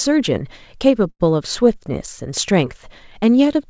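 At 1.10 to 1.22 s the speech hangs: a short stall from a late packet. The jitter buffer ran dry, so the receiver stretched the last sound for about 99 ms and then resumed where it left off, pushing everything after it roughly 99 ms later. Unlike a lost-packet gap or dropout, no speech is missing and there is no silence, only a held sound with a faint buzz or dip. The call path's audio stops at 8 kHz, which fits a wideband codec such as G.722.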